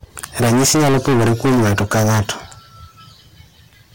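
Hard clipping runs through the whole speech clip: the signal is driven about 22 dB past what the stage can pass, so nearly a third of the samples are cut flat. The squared-off peaks add high harmonics, heard as a harsh, constant fuzz on every loud syllable.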